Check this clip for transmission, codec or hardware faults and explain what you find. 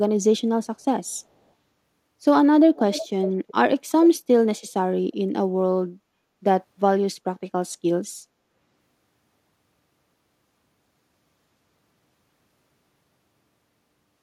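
A faint delayed copy of the speech trails it at 2.75 to 3.08 s, 3.27 to 3.54 s and 3.90 to 4.09 s, lagging by 370 ms and sitting roughly 15 to 20 dB below. This is an echo leak, likely from a loudspeaker-side echo canceller letting some captured sound return.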